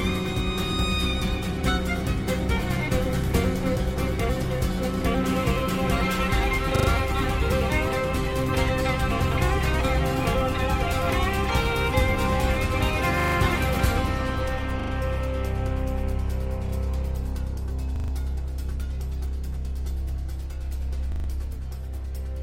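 Repeated buffer stutters at 6.76, 13.2, 14.8, 17.96 and 21.12 s, each a 40 ms chunk replayed three or four times with hard joins, because new audio arrived late.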